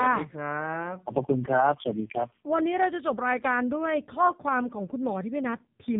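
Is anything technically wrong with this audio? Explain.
Yes, the speech has gone through the AMR narrowband mobile codec for the whole clip. Nothing survives above about 3.8 kHz, and the heavy buzzy, synthetic texture points to one of AMR-NB's low modes, around 5.9 kbps, where the vocal-tract model gets too few pulses per frame.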